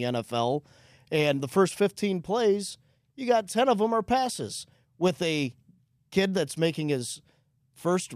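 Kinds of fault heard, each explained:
No faults detected in this speech recording.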